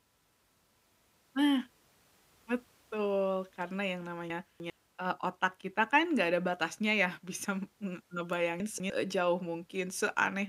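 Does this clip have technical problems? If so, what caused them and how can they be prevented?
Yes. Chunks out of order at 4.3–4.7 s and 8.6–8.9 s: a 100 ms chunk plays three, then two, chunks late, jumbling the sound. Unlike a dropout, nothing is missing. Reordering chunks by sequence number or timestamp before playback prevents this.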